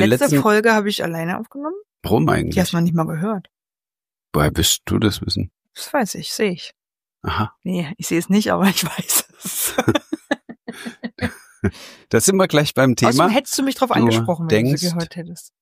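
No technical faults can be heard anywhere here.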